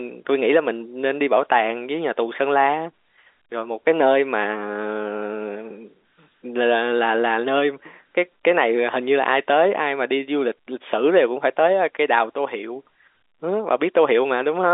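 No technical faults can be heard in this speech recording, which carries the narrow 250 Hz to 3.6 kHz band typical of a telephone line using G.711 A-law coding at 64 kbps.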